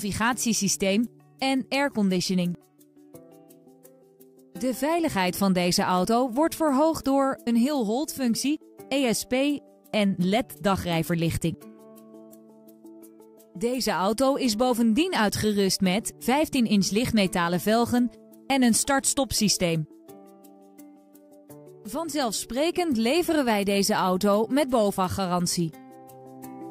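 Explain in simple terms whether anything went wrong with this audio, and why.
Nothing stood out as wrong when listening to this audio.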